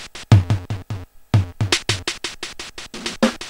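At 2.93 s the sound jumps abruptly ahead, with a brief blip at the join. The likely cause is a stream segment skipped: one chunk of the stream failed to load, and playback carried on from the next chunk, so that portion is simply missing.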